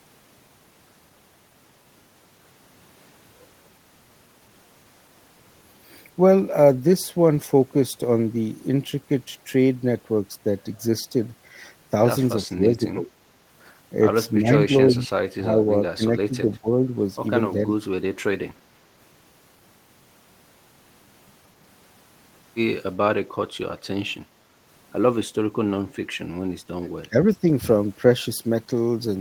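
Speech with speech suppressed in double talk at 12.43–13.07, 14.39–15.10, 15.36–15.59, 15.96–16.68 and 27.02–27.45 s: the level dips about 10 dB, about 20 dB near 16 s, likely an echo canceller ducking the talker while the far side speaks. The waveform shows short troughs; the spectrogram thins, briefly.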